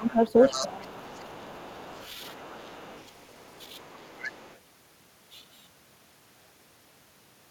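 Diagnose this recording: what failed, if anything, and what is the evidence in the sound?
Call processing: speech suppressed in double talk. Speech drops about 15 dB at 0.0–0.2 s and about 20 dB at 0.61–2.05 s. The echo canceller likely ducked the overlap.

Also call processing: the other side's voice leaking through. A second voice sits about 15 dB down at 0.05–0.74 s, then about 25 dB down at 1.01–4.58 s. Likely incomplete echo cancellation.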